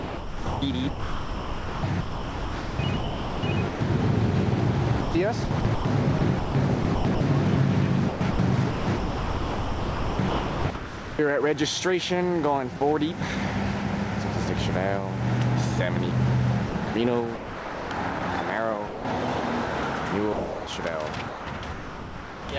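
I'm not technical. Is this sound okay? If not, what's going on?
No. In five stretches, from 0 to 3.8 s, 5.0 to 7.2 s, 8.1 to 11.2 s, 16.7 to 18.2 s and 21.3 to 22.5 s, the sound is choppy, with bits swapped for a soft, artificial hiss. This is sound chopped by the voice detector: the sending end likely kept mistaking real sound for background and switching itself off and on.

In three places the sound briefly vanishes into steady hiss: a tiny gap at 12.77 to 12.81 s, then 18.87 to 19.05 s and 20.33 to 20.67 s. This is sound dropped by the voice detector: the sender likely treated quieter sound as silence, stopped sending, and filler noise played instead.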